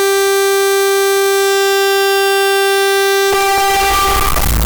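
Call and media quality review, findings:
Float read as integer, whole clip, 0 to 4.7 s. Music extremely loud and harsh, noise floor as loud as the music, pitch still traceable. Waveform: near-square blocks pinned at a high, near-constant level. Spectrogram: dense broadband smear, harmonics still visible. Likely cause: decoder or format handler treating 32-bit float samples as 32-bit integer.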